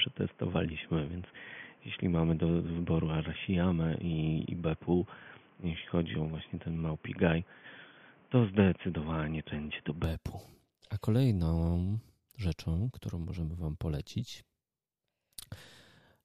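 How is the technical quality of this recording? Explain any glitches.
One fault stands out. From 0.0 to 10.04 s the speech is dull and boxy, with nothing above 3.4 kHz and a separate noise floor roughly 30 dB below the signal. It then opens up with no gap and little level change. The likely cause is an input switched to a poorer device, either another microphone or a headset's call profile, whose narrow passband and own noise shape that opening stretch.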